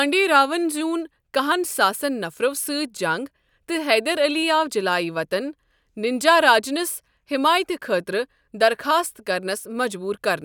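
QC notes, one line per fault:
No faults heard anywhere in this speech clip.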